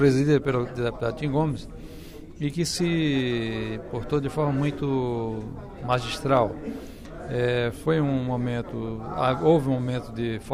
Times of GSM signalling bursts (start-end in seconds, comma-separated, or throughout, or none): none